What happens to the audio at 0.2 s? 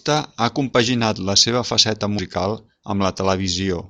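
At 0.2 s the speech plays through intact, with no dropout, click, distortion or other fault at that point.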